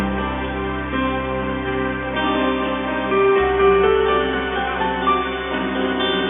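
No technical faults are audible.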